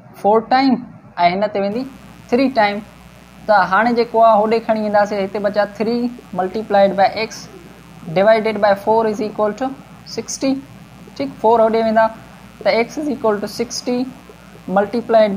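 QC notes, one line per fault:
1.71 to 15.37 s, mains buzz: a steady, raspy buzz comes in and stays to the end, sitting roughly 30 dB below the main signal. Sharp switching spikes twice per 60 Hz cycle stack up harmonics reaching several kHz, hence the rasp rather than a hum.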